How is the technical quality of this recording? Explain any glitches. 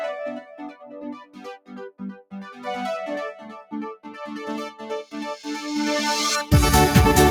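The quality is compromised by processing. A noise suppressor built for speech was applied to music or sounds, treating steady material as noise, so levels pump by around 10 dB throughout.

Sound cut by the noise suppressor occurs from 0.41 to 2.66 s (about 2 s, dipping by about 18 dB), 3.33 to 3.73 s (about 12 dB), and 3.96 to 4.12 s (about 17 dB), where sustained sound sinks and tails are clipped short.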